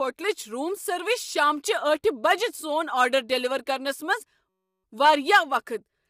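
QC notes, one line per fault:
Throughout: low-delay AAC compression. The speech has a rough, grainy texture, with noise filling the gaps between the pitch harmonics. This is likely the low-delay AAC used for video calls. Its very short frames cannot separate closely spaced harmonics well, and a low bitrate, plausibly around 32 kbps, leaves too few bits to hide the error. The damage is spread across the whole clip and nothing is present above 23.3 kHz. Ordinary AAC would sound smoother on voiced sounds.
4.49–4.84 s: system hang loop. For about a third of a second, one 5.33 ms slice of audio repeats exactly, about 65 times. This produces a steady buzz at 188 Hz rather than a choppy stutter. The loop length fits a 256-sample buffer that the hardware kept replaying while the system froze. It differs from a dropout or packet-loss glitch because there is no silence and little or no audio goes missing. 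The same tiny fragment simply cycles identically.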